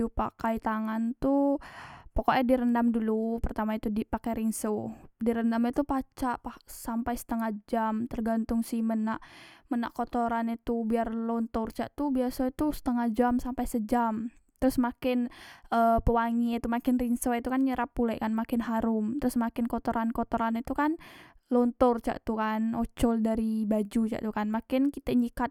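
No technical faults can be heard anywhere in the speech recording.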